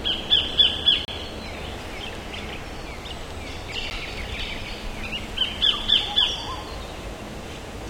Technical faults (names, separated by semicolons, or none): block of digital silence